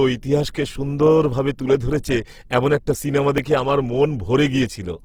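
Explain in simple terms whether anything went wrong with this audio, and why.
Two things went wrong here. The whole recording has a rough, grainy texture, most likely from Opus compression squeezed to a low data rate. The encoder is in its music mode and keeps the full range of frequencies, but it runs short of detail, so it fills the gaps with borrowed or noisy material. That's why the speech sounds sandy and harsh, not muffled, and the damage is easy to hear all the way through.

The second problem is a dropped buffer (overrun) at about 3.38 s, right after "ধরেছে এমন একটা সিনেমা" and just before "দেখে আমার". The software likely didn't collect a small chunk of audio in time, so it got overwritten and lost. Roughly a hundredth of a second vanished, and the two sides were joined straight together. That produces a tiny jump forward, with no gap of silence.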